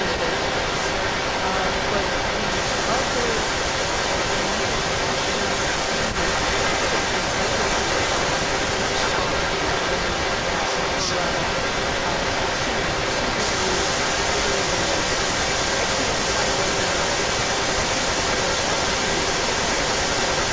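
From the very start to the end of the clip, a second copy of the speech trails the original by about 0.33 s, and it sits roughly 10 dB above the direct voice, so the repeat dominates. This is an echo leak, likely from a far end playing the call on a loudspeaker whose echo canceller failed to subtract what its microphone caught, sending that delayed pickup back down the line. The band tops out at 8 kHz from the call's microphone processing.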